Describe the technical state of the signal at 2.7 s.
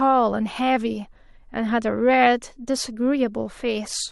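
At 2.7 s the speech signal is intact, with no audible fault at that moment.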